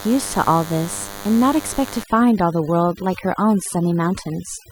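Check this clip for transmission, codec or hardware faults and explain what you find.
Two faults are present in the speech: a DECT cordless phone buzz running through the whole clip, and overdone noise removal over the second half.

The DECT cordless phone buzz is present from start to finish, sitting roughly 15 dB below the speech. A nearby DECT handset or base transmits a brief radio burst every 10 ms, and the audio circuitry rectifies it, producing a steady, thin 100 Hz buzz rich in harmonics.

Overdone noise removal starts at 2.03 s and continues to the end. A noise reducer set too aggressively pulls individual frequency bands down or out whenever they approach its noise estimate, taking quiet speech detail with them. The room noise, about 21 dB below the speech, drops and breaks up into twinkling specks.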